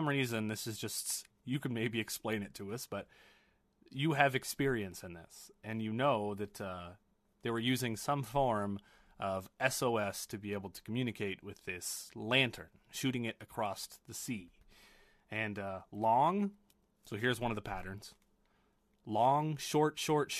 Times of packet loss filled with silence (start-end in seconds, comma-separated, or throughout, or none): none